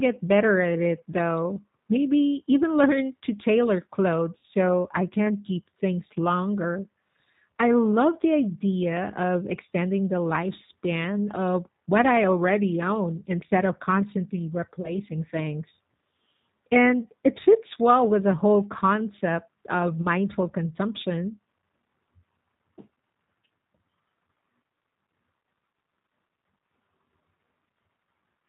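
From the start the speech carries the G.729 codec's slightly rough, synthetic quality, which is plainly audible. Everything above 4 kHz is missing, so a spectrogram shows a hard ceiling there, and the formants look smeared because the 8 kbit/s coder rebuilds each 10 ms frame from a filter, a pitch predictor and a few pulses.

At 4.39 to 4.43 s, 14.82 to 14.92 s and 20.02 to 20.07 s, VoIP packet loss concealed by the speech codec stretches the last sound into a fading buzzy tone or coloured noise. The first gap, 40 ms, fits two lost packets and the others one each. On the waveform the envelope sags smoothly, and the spectrogram shows the last sound held and fading, with weak onsets afterwards.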